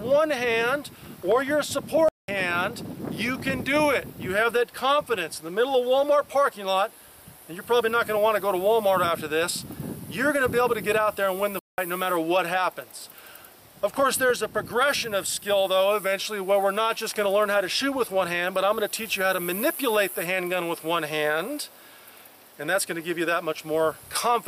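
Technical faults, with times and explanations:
2.09–2.28 s and 11.59–11.78 s, playback stall: the player likely ran short of data or had its output thread blocked, so the sound cuts out mid-flow into silence for about 0.2 s each time, roughly 197 ms and then 189 ms, before carrying on once output recovers.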